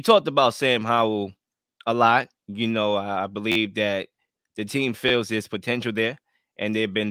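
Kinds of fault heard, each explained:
Repeated buffer: two brief stutters in the speech, at about 3.52 s and 5.09 s, each a rapid burr of identical slices with a hard join at every repeat. The first runs for about 46 ms and the second for about 23 ms. Each slice lasts about 11.6 ms, which fits a 512-sample buffer. Fresh audio failed to reach the output in time, so the device replayed its last buffer. No speech seems to be skipped.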